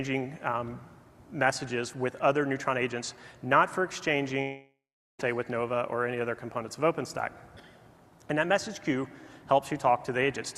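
At 4.41 s the sound gives way to a smeared buzz that fades out. About 0.43 s of silence follows. Sound returns at 5.21 s, already further on. This is likely a long network dropout, with 0.78 s of audio lost for good.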